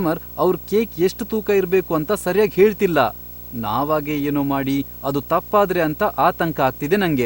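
From start to finish, the speech carries video or display buzz. A screen or video cable is coupling its signals into the audio line. The main component is a buzz at 59.94 Hz, the picture's field rate, with a gritty hash above it. There is also a thin, very high tone at 15.7 kHz, the line rate. The interference sits roughly 15 dB below the speech. It never lets up, even between phrases.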